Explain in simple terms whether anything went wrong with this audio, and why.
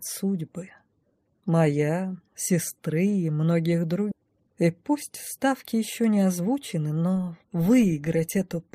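Yes, two things went wrong. At 4.11 s there is a skip ahead: roughly 0.7 seconds of audio never played. Delayed packets were likely dropped while later audio was already waiting, so playback jumps forward and the two sides of the gap are joined almost directly, with no silence in between.

From 4.21 s to 7.13 s comes a jitter buffer speed-up. With too much audio queued, the receiver trimmed many tiny slices to catch up, about a fifth of a second in total. The sound plays about 8% faster at unchanged pitch, so it feels slightly hurried.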